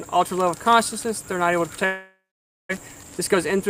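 From 1.85 s to 2.73 s the sound breaks off, most likely through a long network dropout. The last sound is stretched into a buzzy tail that fades, then about 530 ms of silence follows before the audio returns. About 600 ms of material is simply gone, and playback comes back roughly a fifth of a second later than before. On a spectrogram the tail shows as smeared, repeating bands fading to blank; the waveform decays to a flat line.

From 2.81 s to 3.68 s a jitter buffer speed-up takes over. The receiver trims short pitch-period-sized slices again and again to shed about a tenth of a second of backlog, so the sound runs at 112% speed while its pitch stays put, giving a hurried feel. On a spectrogram the harmonic lines stay at the same height but events crowd closer together; the waveform keeps cycles of the same length, with whole periods dropped out.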